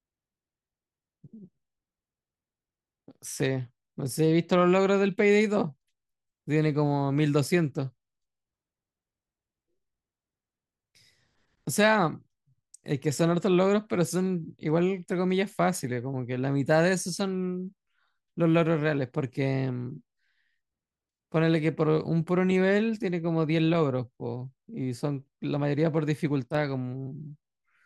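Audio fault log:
26.44 to 26.55 s, sudden gain jump: for about a tenth of a second near the end of the speech, the level drops by about 6 dB from one sample to the next and then comes back, with the speech and the background noise falling and returning together rather than fading. That shared step, with no ramp on either edge, is likely a digital gain change or bit shift applied instantly and then undone.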